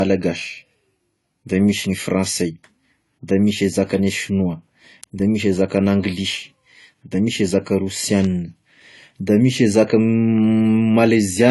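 Throughout, nothing sounds above 11.5 kHz. This is likely low-bitrate audio saved at a high bitrate. The earlier coarse encoding's losses remain.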